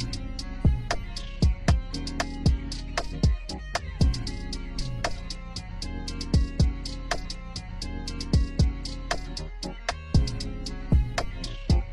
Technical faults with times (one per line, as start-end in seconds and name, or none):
7.20-9.20 stream segment repeated